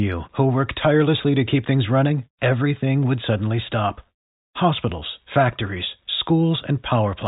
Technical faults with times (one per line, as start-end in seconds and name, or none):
none